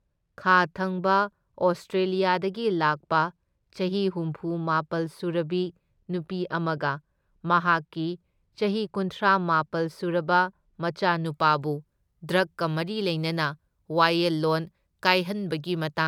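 From 0 to 11.26 s the speech suffers wrongly applied de-emphasis: an unneeded treble cut slopes the response down, about 13 dB at 10 kHz, leaving it dull and muffled.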